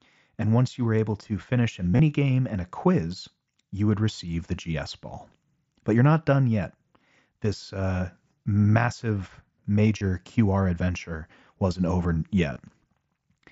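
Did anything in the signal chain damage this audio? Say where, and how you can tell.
Yes, at the Bluetooth link: concealed Bluetooth headset packet loss at 1.92–1.99 s after "able to finish a", 9.98–10.01 s after "uh massive", and 12.54–12.56 s after "adventure wasn't over". Lost packets were patched by repeating recent waveform, which sounds like a brief buzzy hold. On a spectrogram this appears as frozen, repeated harmonic bands, and on the waveform as a short periodic copy.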